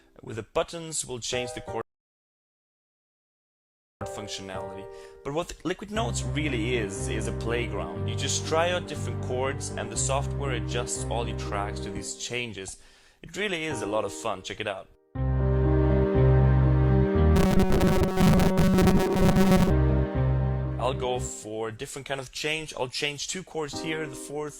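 At 1.81 s the sound drops to silence and stays there until 4.01 s. This is a rebuffering stall: playback ran dry of downloaded data and paused until more arrived, adding about 2.2 s to the running time. The sound picks up at exactly the point where it stopped. That seamless continuation is what separates a stall from a dropout or packet loss, where material goes missing and the sound jumps ahead after the gap.

From 17.36 s to 19.70 s the sound takes on a hard, metallic buzz locked at 188 Hz. Its rough shape stays recognisable, but most of the real material in that stretch is skipped. This is robotic sound from repeated short buffers, likely caused by audio arriving too slowly while the software loops a fragment of about 5.3 ms to fill the time. The fixed pitch of the buzz sets it apart from ordinary codec warble, which drifts rather than holding one steady tone.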